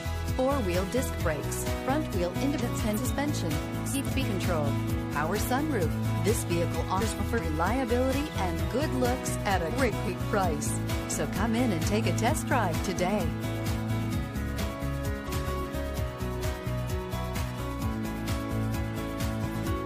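Frames out of order at 2.59–2.98, 3.91–4.23, 7.00–7.40, 9.69–10.08, 15.26–15.66 and 19.45–19.64 s. In each, two adjacent runs of frames (mostly about 190 ms each, roughly 140 ms and 90 ms in the second and last) got swapped. You hear a garbled flutter, and no time is lost.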